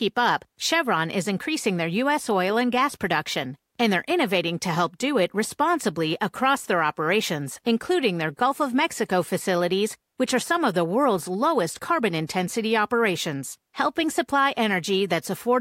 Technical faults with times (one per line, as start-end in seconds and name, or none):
10.69 electrical switching spike